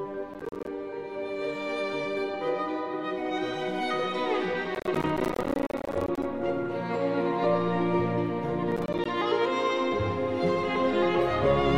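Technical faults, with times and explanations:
0.34–0.67 s, processor overload crackle: the processor misses buffer after buffer, each short drop to silence with hard edges, so you get a gritty crackle, around ten-millisecond gaps.
4.75–6.25 s, processor overload crackle: same thing but longer, dozens of missed buffers in a row leaving silent holes, heard as a sustained tearing crackle until the load eases.
8.72–9.06 s, processor overload crackle: a shorter burst again, roughly ten missed buffers dropping out to silence, giving a brief rough crackle over the sound.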